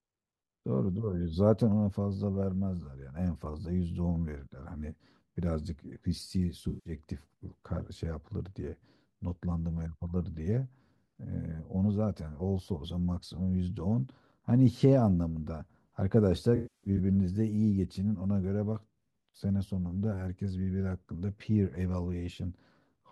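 AAC frame loss with concealment occurs twice in this speech clip. The decoder lost frames and rebuilt the gaps from the last good spectrum. From 6.68 to 6.94 s, about 171 ms is replaced, which points to a run of around eight frames, and it sounds smeared and synthetic. From 16.56 to 17.00 s, losses scattered over 427 ms, with the longest run around 150 ms, leave a broken, smeared stretch.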